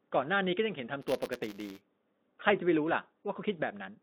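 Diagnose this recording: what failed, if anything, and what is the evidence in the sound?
Buffer tearing at the driver buffer, 1.01 to 1.81 s. A 172 Hz rattle suggests a 256-sample buffer. Each period splices in a sliver of audio about 10 ms old.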